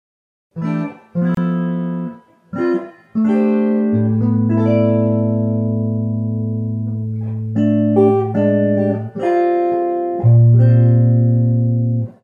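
At 1.35 s the sound drops out for about 27 ms, until 1.37 s. That's a gap at a join of encoded pieces: two separately encoded chunks were butted together without trimming the encoder's lead-in silence and end padding. The edges are smeared by the codec, and the sound resumes right where it stopped.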